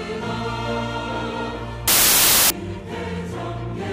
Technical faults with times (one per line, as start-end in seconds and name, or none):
1.88-2.50 samples built from the wrong bytes